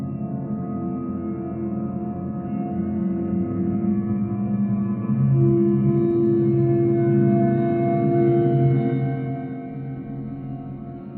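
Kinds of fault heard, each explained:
Zipper noise: the gain control drops the level in coarse, unsmoothed increments instead of a continuous ramp, around a hundred small jumps a second, each one putting a tiny discontinuity into the waveform. From 8.77 to 9.59 s, as the level falls by roughly 10 dB, those jumps run together into a fine ticking, zipping texture laid over the sound.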